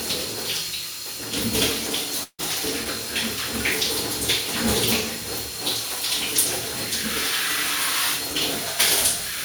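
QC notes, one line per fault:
2.23–2.41 s, long network dropout: the sound breaks off and the gap is covered by a decaying buzz built from the last audio, running about 150 ms before it thins to near silence for roughly 50 ms. About 160 ms of material never returns, and the sound resumes further along, likely because packets stopped arriving and the receiver concealed the hole. On a spectrogram, smeared repeating bands fade into a dark strip; the waveform shows a tapering envelope, then a flat line.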